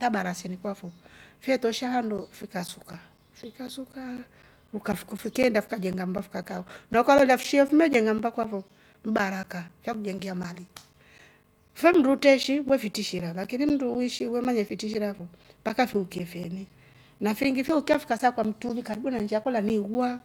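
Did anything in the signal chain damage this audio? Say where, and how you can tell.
Yes. From about 2.18 s right through to 20.2 s there's a tick every 0.25 s, roughly seventy in all, and they only show up while the speech is actually sounding. That's the signature of periodic USB or driver dropouts: something in the driver or buffer stage stalls on a fixed timer, and each time around 10 ms of audio goes missing and gets replaced by silence. The abrupt gaps are what you hear as regular clicks.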